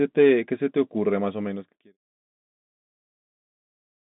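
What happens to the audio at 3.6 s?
Nothing goes wrong at 3.6 s; the audio at that moment is intact.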